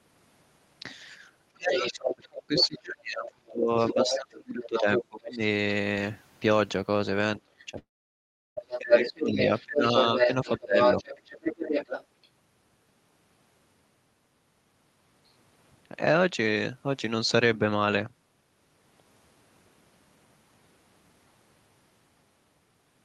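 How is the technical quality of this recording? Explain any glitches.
The recording has clear call-related impairments. Between about 1.5 and 12.3 s the talker is repeatedly turned down while a second voice bleeds through, and a network loss leaves a gap near 8 s. The content above roughly 12 kHz is missing, which points to an Opus call codec running near 32 kbps.

Speech suppressed in double talk occurs from 1.53 to 5.41 s, 7.43 to 9.83 s, 10.25 to 10.77 s and 11.36 to 11.40 s. When both sides spoke at once, the echo canceller likely could not separate them and ducked everything. The voice drops by up to about 30 dB, and by about 25 dB and about 15 dB in the last two spans. The waveform envelope caves in, and the spectrogram thins, losing its upper bands first.

The other side's voice leaks through at 1.73 to 2.15 s, 2.57 to 2.79 s, 3.80 to 5.37 s and 7.59 to 12.29 s. This is likely residual loudspeaker echo that the canceller left in the microphone signal. 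It sits about 5 dB under the talker, and in the final stretch it is roughly as loud. On a spectrogram it appears as a second, independent set of harmonic stripes overlapping the talker's.

A short concealed packet loss falls at 7.71 to 7.75 s. About 20 ms of audio never arrived in time, and the decoder bridged the hole by extending the preceding sound before blending back in. It is heard as a brief smear or wobble. The spectrogram shows a tiny stretch of frozen, smoothed harmonics.

A long network dropout runs from 7.79 to 8.58 s. This was likely a stretch of about 0.78 s in which no audio arrived. Concealment briefly continued the last sound as a fading buzz or hiss, and then roughly 0.72 s of near silence follows before the audio resumes further on. The waveform goes flat there, and the spectrogram shows a blank gap.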